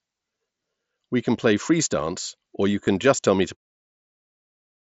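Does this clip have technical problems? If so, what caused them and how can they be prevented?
Yes. Concealed Bluetooth headset packet loss occurs from 2.85 to 2.87 s. About 22.5 ms was lost between headset and phone, fitting three dropped frames. The phone filled it with a repeated recent stretch. Keep the headset near the phone.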